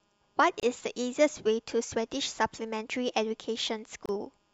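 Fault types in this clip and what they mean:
Gap at a join of encoded pieces: the speech was encoded in separate pieces and joined without trimming, so each piece's encoder start-up delay and padded final frame stayed in the stream. At each join the continuous speech drops into a short silence of about 31 ms, at 0.60 s and again at 4.06 s, with edges smeared by the codec. The speech then resumes exactly where it stopped.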